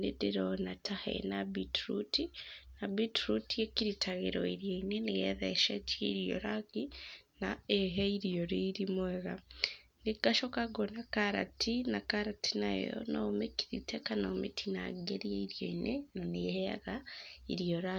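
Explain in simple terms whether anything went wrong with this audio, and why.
From 0.45 s to the end, a steady ticking buzz runs under the speech, about 20 ticks per second. This is a resampler restarted on every block. The sound was converted in 50 ms pieces, each handled alone, leaving a small glitch at every join.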